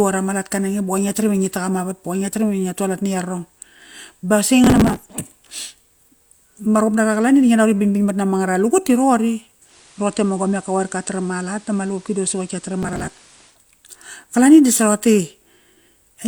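From 4.64 to 5.18 s a burst of processor overload crackle rides on the speech. The processor fell behind on a run of very short buffers, which fits a buffer of roughly 3 ms, and missed dozens of deadlines in a row. Each missed buffer was skipped, leaving a tiny hard-edged gap where the audio jumps ahead. Together these gaps make a gritty tearing that stops once the load clears.

At 9.64 s the sound goes through digital radio blending to analogue. The receiver lost the digital stream and cross-faded over 117 ms to the station's FM broadcast. The level drops by about 1 dB, and hiss comes up at roughly 30 dB below the signal. A second overload crackle of the same kind runs from 12.83 to 13.32 s, late in the analogue stretch. The blend back to digital comes at 13.58 s.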